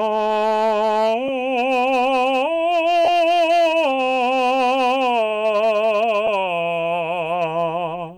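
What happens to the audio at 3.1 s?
At 3.05 s the music breaks up for about 30 ms, to 3.08 s. These are lost LE Audio frames. The Bluetooth link dropped data, and the gap fits three 10 ms frames. The LC3 decoder filled it by repeating the last spectrum with random signs. The tones lose their shape and become a brief noisy smear. Because the loss is short, the sound returns before any fade to silence.

Hard clipping also runs through this moment, as it does across the whole clip. The signal is driven about 5 dB past what a stage can pass, so a few percent of samples have their peaks cut flat. The flat tops add high harmonics, heard as crackle on the loudest peaks.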